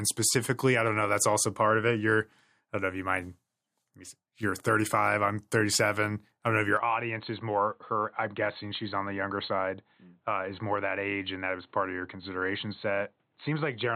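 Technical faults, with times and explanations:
6.77–13.96 s, input switched to a poorer device: right after "I don't know if", the speech turns dull and boxy with nothing above 4.2 kHz, gets slightly quieter and gains a faint new noise floor, with no gap, likely from recording moving to a narrower-band microphone.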